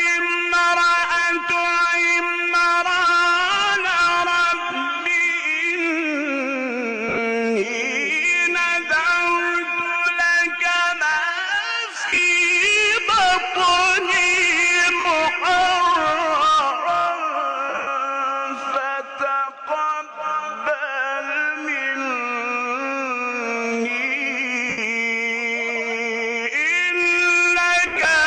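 Lost LE Audio frames at 7.08, 11.95, 15.00, 17.69, 24.69 and 27.87 s: the decoder fills each gap with a repeated spectrum of random sign, leaving brief noisy smears.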